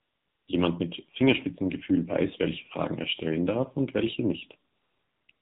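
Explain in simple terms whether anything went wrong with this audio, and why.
Yes, two things went wrong. First, the whole recording passed through the AMR narrowband mobile codec, the squeezing system old mobile phone networks use. It throws away everything above 4 kHz and rebuilds the voice from a rough model at a low data rate, so this speech sounds muffled, thin and noticeably buzzy and synthetic all the way through, like a call on a weak phone line.

Second, there is AMR comfort noise in three places. The phone decided nobody was talking, stopped sending the real sound, and the receiving end filled the gap with artificial hiss instead. That happens at the very start, from 0 to 0.48 seconds, then again from 4.72 to 5.28 seconds, right after "stellen darf und welche", and once more from 5.32 seconds to the end. In those stretches the real background disappears and a smooth, even noise switches in and out.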